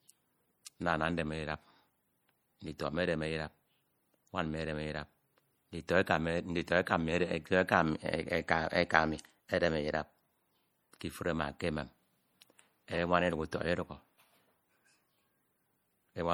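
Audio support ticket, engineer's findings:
Watery, swirly texture on speech throughout, plainly audible; sibilants chirp metallically and consonant attacks smear. Likely MP3 compression, damage that fits a low bitrate near 48 kbps. Weak frequency lines flicker frame to frame, unlike steady noise-reduction dulling. Nothing above 21 kHz.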